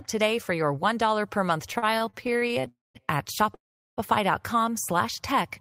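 Repeated stalls (stutter) run from 1.73 to 2.68 s. The packets arrived late or too slowly, so the jitter buffer kept running dry, 19 times in all, with the longest gap 42 ms. Each gap was filled by continuing the last sound, about 285 ms in total and roughly 30% of that span. Nothing is lost, but the speech drags and stutters.

A call audio freeze follows at once, from 2.68 to 2.97 s, and a second comes at 3.55 to 3.99 s. The last sound carries on briefly, then fades to silence for about 180 ms and 390 ms respectively. The speech then resumes where it stopped, now 264 ms and then 428 ms late, which points to packets likely held up in transit until the buffer emptied.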